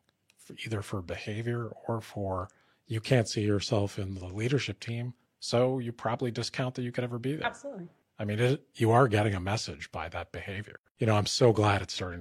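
No technical faults can be heard anywhere in this speech recording. There is nothing in the audio that needs a timestamp or an account of something going wrong.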